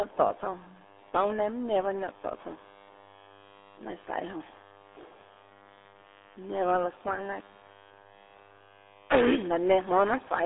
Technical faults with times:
0.00-10.45 mains buzz
0.00-10.45 RealAudio 14.4 codec

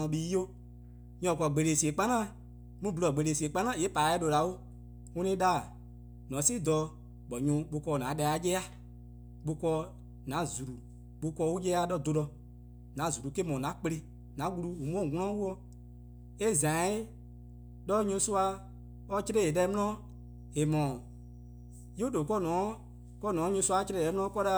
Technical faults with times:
0.00-24.57 mains hum

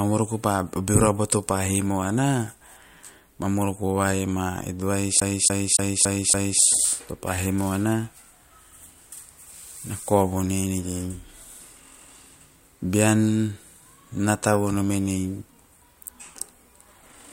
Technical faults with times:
5.20-6.62 CD stuck on one turn

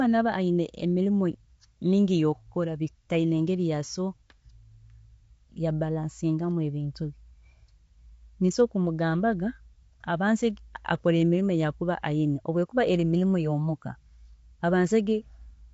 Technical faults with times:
0.00-15.73 low-delay AAC compression

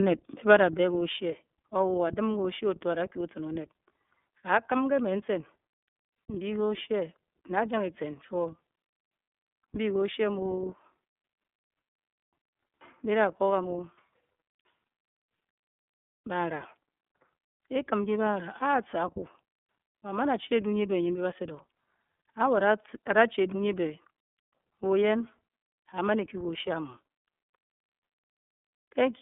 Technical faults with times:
0.00-29.22 iLBC codec

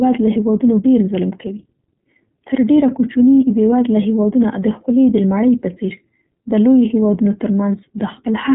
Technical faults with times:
0.00-8.54 iLBC codec

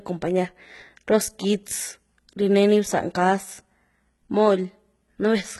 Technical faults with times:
0.00-5.60 HE-AAC compression

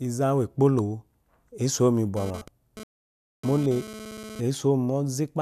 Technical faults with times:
2.17-4.40 GSM phone buzz
2.83-3.44 digital broadcast dropout

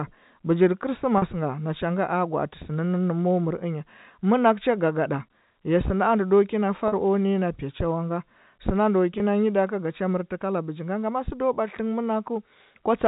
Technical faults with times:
1.18-1.22 packet loss with pitch repetition
6.88-6.92 packet loss with pitch repetition
9.18-9.20 packet loss with pitch repetition

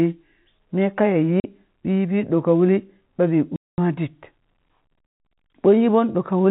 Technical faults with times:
1.40-1.44 packet loss filled with silence
3.56-3.78 packet loss filled with silence
5.06-5.20 packet loss filled with silence

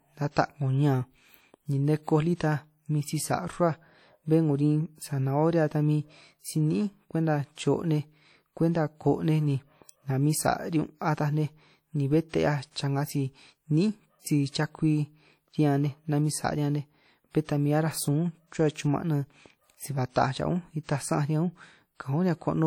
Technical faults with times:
0.00-22.66 WMA compression
12.71-12.76 pre-echo

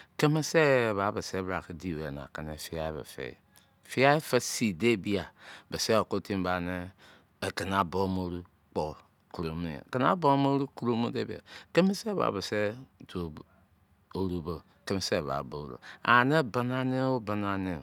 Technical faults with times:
none

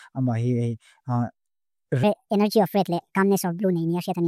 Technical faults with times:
2.03-4.28 section at the wrong speed

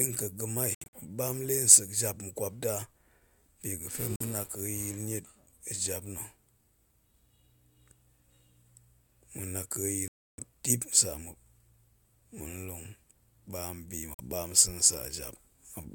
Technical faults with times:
0.74-0.87 Bluetooth dropout
4.16-4.21 Bluetooth dropout
10.08-10.39 Bluetooth dropout
14.14-14.20 Bluetooth dropout

